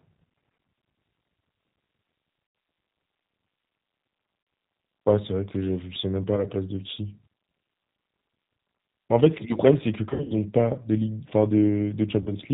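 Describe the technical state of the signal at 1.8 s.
At 1.8 s the speech carries G.729 codec damage that runs through the whole clip. The sound is rebuilt from a vocal-tract filter, pitch predictor and sparse pulses, so it is rough and synthetic with nothing above 4 kHz. The sparse-pulse buzz fits an 8 kbit/s codec and distinguishes it from a plain low-pass filter.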